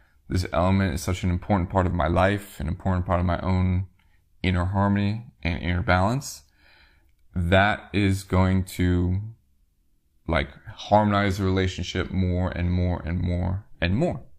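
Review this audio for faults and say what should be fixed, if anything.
Nothing in this audio needs to be fixed, as there are no faults to review.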